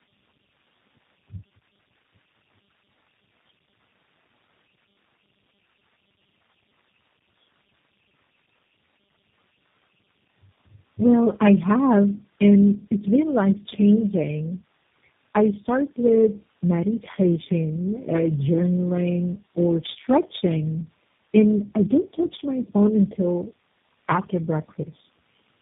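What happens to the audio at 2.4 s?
At 2.4 s the speech shows tandem speech coding, present throughout. It sounds like three low-rate speech codecs in sequence, each recoding degraded output. The result is rough, muffled, warbly speech with nothing above 3.8 kHz.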